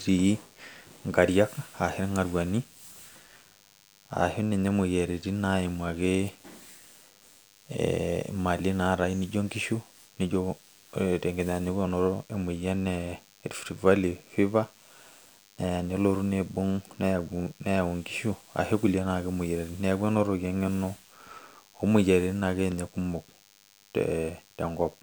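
From start to finish there's DECT cordless phone buzz under the speech: a thin, steady 100 Hz buzz full of harmonics, sitting roughly 30 dB down. A nearby DECT handset or base is pulsing radio every 10 ms, and the audio circuitry is rectifying those bursts into sound.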